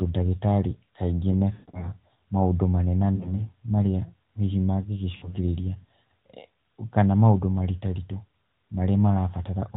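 Lost AMR speech frames at 1.54–1.91 s (220 ms gone, the longest run 140 ms, drawn out and fading), 3.16–3.43 s before "marĩa hihi", and 5.16–5.35 s after it, where the decoder smears the last good sound with falling gain.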